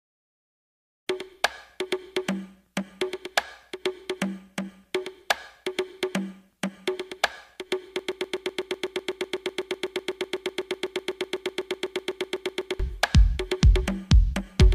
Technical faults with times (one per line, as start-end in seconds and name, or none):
7.99-12.79 broken-record loop